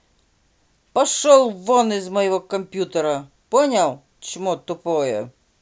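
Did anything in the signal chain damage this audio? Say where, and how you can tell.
No, nothing in the chain damaged it.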